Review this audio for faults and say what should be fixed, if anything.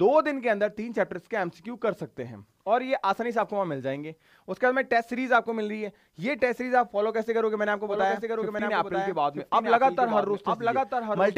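Doubled audio track from 7.87 s to the end: a full-band copy of the sound enters abruptly, trailing about one second behind and a few dB quieter, with no decay or room colour. It likely comes from the signal being captured again through a slower path. To prevent it, record each source through a single capture path and mute any loopback or monitor return feeding the recorder.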